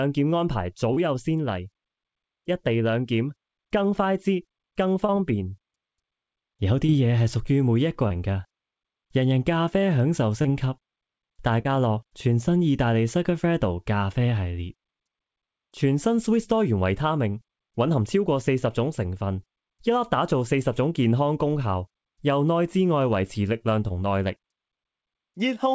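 Short concealed packet loss at 0.94, 5.06, 6.86, 8.08, 10.42, 11.62 and 23.88 s, each about 20 ms of missing audio, bridged by extending the preceding sound into a brief smear or wobble rather than a silent dropout. The audio passed through a WebRTC call path with nothing above 8 kHz, which fits the G.722 codec.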